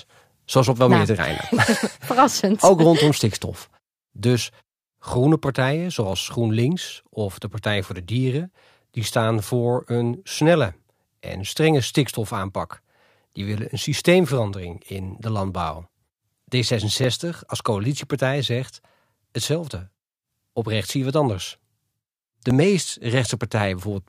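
From 0.68 s to 22.50 s, about ten clicks recur every 2.73 s: clock drift buffer slips, likely from two clocks disagreeing by a few hundred ppm, each dropping or repeating a few dozen samples. Spectrograms show evenly spaced thin vertical lines.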